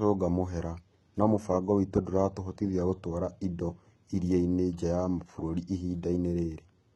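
Throughout the speech, the treble above a crossover is not genuine, with gritty, lispy s sounds and nothing above 11.8 kHz. That points to heavy HE-AAC compression, likely at a very low bitrate near 16 kbps. Unlike a plain low-pass, it keeps a treble band, copied upward from lower frequencies.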